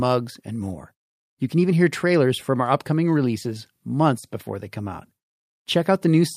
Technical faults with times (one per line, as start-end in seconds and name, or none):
none